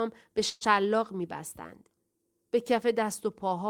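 At 0.49 to 0.64 s there's a call audio freeze: the speech stalls into a fading buzz, likely delayed packets draining the jitter buffer, then resumes intact about 116 ms late.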